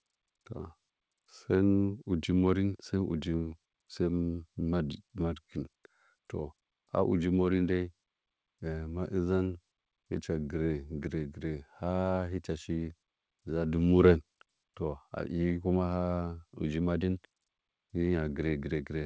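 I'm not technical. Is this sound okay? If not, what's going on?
Yes, nothing here is faulty; the speech came through a normal call connection, whose codec keeps nothing above 8 kHz, so the top end sounds a little duller than a studio recording.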